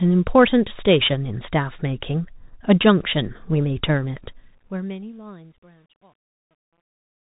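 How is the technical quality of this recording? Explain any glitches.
The technical quality is poor, with two faults in this speech recording.

Throughout, the audio passed through a Bluetooth CVSD headset codec, a one-bit delta coder whose adapting step can't follow fast high-level changes. Nothing reaches above 3.8 kHz, so the speech sounds muffled and narrowband, with scratchy s sounds, harsh loud peaks and a granular hiss underneath.

From 4.02 s to the end at 7.26 s, the fade-out shows truncation distortion. The level stage keeps too few bits and adds no dither, which fits roughly 10-bit gain steps. As the smooth fade-out drops the level, the waveform collapses into coarse steps, and from 4.94 s onward the tail sounds gritty.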